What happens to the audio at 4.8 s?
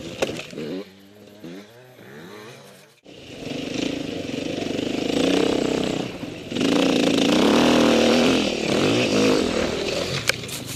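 Nothing goes wrong at 4.8 s: the audio runs through that moment intact, with no dropout, click or other disturbance.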